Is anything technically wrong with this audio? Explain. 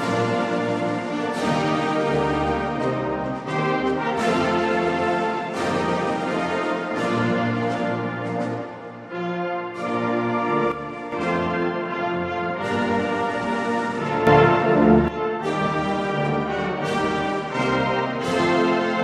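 Yes. There are two sudden gain jumps. The likely cause is a digital gain stage switching level from one sample to the next with no ramp. From 10.72 to 11.12 s the audio drops by about 8 dB, and from 14.27 to 15.08 s it rises by about 9 dB. In both windows the sound and the background noise step down or up together, so the level change is abrupt rather than a natural fade.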